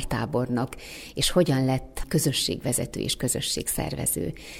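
No technical faults can be heard anywhere in the audio, so there are none to describe in time order.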